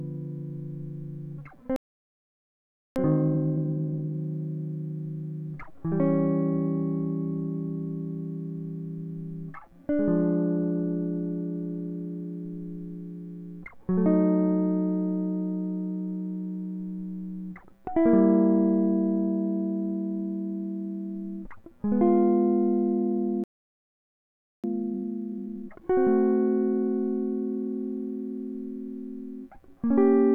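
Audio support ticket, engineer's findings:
Playback stall at 1.76–2.96 s and 23.44–24.64 s: music cuts to silence mid-flow for about 1.2 s each time, then resumes where it stopped. Likely buffer underrun or blocked playback thread starving the output.

Time-compressed catch-up at 2.96–4.14 s and 24.64–25.82 s: music runs at 2x speed, pitch unchanged. Player drops and cross-fades short segments to clear the backlog left by each stall.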